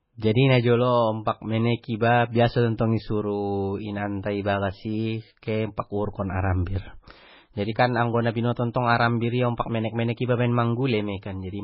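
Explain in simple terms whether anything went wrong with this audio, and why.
Something did go wrong, and it lasts the whole recording, from the first second to the last. The speech sounds dull and watery. Nothing can be heard above about 5.5 kHz, so the crisp top of the sound is missing. S sounds come out smeared or metallic, and quiet details seem to swirl in and out. This is heavy MP3 compression damage. The likely cause is saving the file at a very low quality setting, which cuts the treble and discards faint detail.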